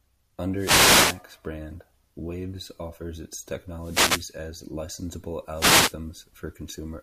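Three wireless microphone noise hits break into the speech: 0.53 to 1.24 s, 3.76 to 4.39 s just after "offers its", and 5.54 to 5.97 s. Each time the FM radio link fades from cancelling reflections, so receiver hiss surges up as a brief swish of static over the voice.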